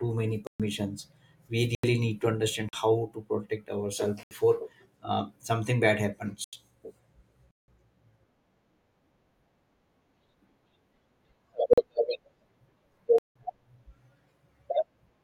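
Abrupt holes in the speech at 0.47, 1.75 (just before "need to understand how"), 2.69 (between "need to understand" and "how to protect ourselves"), 4.23, 6.44 (after "uh something bad"), 7.51, 11.73 and 13.18 s, lasting from 43 to 171 ms. Each is a block of digital silence: whole blocks of samples were dropped to zero with no fade. Most of the lengths fit audio buffers of 2048, 4096 and 8192 samples that were not filled in time.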